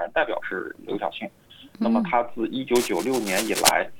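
A worn or loose cable, connector or control was likely being disturbed, its contact resistance jumping about rapidly, and the result is cable scratch noise from 2.75 s to 3.69 s. For just under a second, dense, irregular bursts of crackle and rustle sit over the audio at roughly the same level as the wanted sound, so the scratching competes with it rather than hiding underneath before it stops near the end of the clip.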